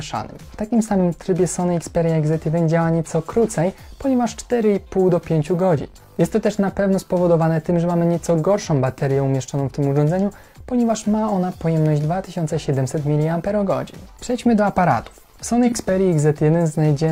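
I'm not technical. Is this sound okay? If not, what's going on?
No. At about 15.67 seconds there is AAC frame loss with concealment: a gap of roughly 43 milliseconds, which fits a single lost chunk of the compressed audio. The decoder couldn't play that piece, so it patched the hole by reusing the sound from just before and randomising it slightly. Because the gap is so brief, you hear a tiny smeared, noisy or hollow-sounding blip near 15.7 seconds rather than silence.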